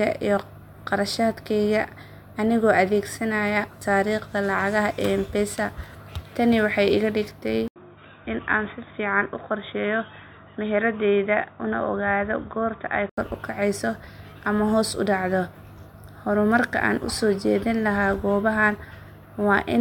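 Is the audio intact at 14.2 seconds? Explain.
Yes, the audio is intact at 14.2 seconds, with no fault audible at that moment.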